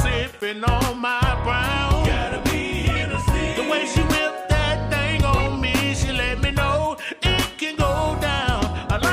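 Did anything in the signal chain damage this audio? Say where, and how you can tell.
Yes, at the driver or buffer stage. There are two blocks of digital silence: an 11.6 ms gap at 0.41 s and a 2.9 ms dropout at 5.64 s. Each one cuts out abruptly and back with no fade. Both gaps are under about 15 ms, so each is heard as a tick or dip rather than as silence. The lengths fit 512-sample and 128-sample buffers, which points to output buffers that weren't filled in time and were written out as zeros.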